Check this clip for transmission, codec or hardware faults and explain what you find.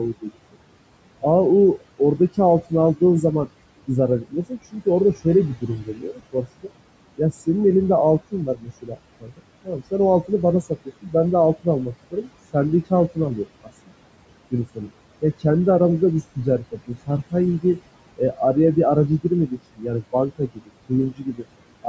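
The clip has two related faults, both from a noise suppressor on the call path.

Noise suppressor artifacts run through the whole clip. The room noise, which sits about 16 dB below the speech, drops away between phrases and comes back under them. The suppressor cuts bands it judges to be steady noise by roughly 21 dB, frame by frame, so the background follows the speech up and down.

Speech cut by the noise suppressor appears as soft consonants and word tails that sound swallowed or faint. This happens at 0.14–0.55 s, 1.8–3.23 s, 3.87–7.48 s, 8.31–13.92 s, 14.51–15.45 s and 16.0–21.86 s. The worst dips are about 18 to 21 dB. The suppressor mistook quiet speech for noise and turned it down with the background. The damage is brief in the first, second and fifth stretches, a tenth to a fifth of a second, and amounts to roughly a second or more in the longer stretches. The call's microphone processing, which leaves nothing above 8 kHz, adds no fault of its own.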